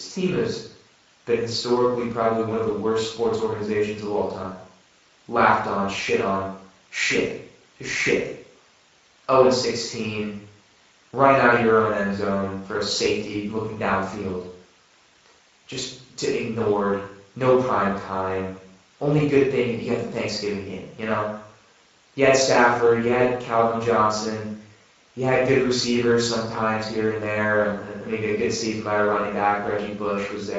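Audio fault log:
Throughout: Speex codec damage is plainly audible, with the speech sounding grainy and hoarse. This CELP coder models the vocal tract and spends few bits on the excitation signal, and this level of coding fits a rate near 16.8 kbps.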